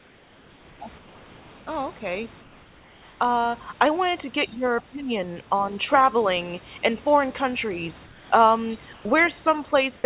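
From 0.0 to 0.8 s, 0.98 to 1.67 s and 2.42 to 3.2 s, the room background gives way to a steady, featureless hiss about 3 dB quieter. This is likely comfort noise in place of the background while transmission paused. At 4.46 to 4.64 s and 4.81 to 5.23 s the speech dips by around 10 dB, then by as much as 25 dB, likely speech suppressed in double talk by the echo canceller. Flat noise, likely comfort noise again, returns at 8.06 to 8.3 s, about 4 dB down, and at 8.93 to 9.05 s, about 3 dB down. A slight dip of about 5 dB at 9.64 to 9.73 s is likely the same double-talk suppression.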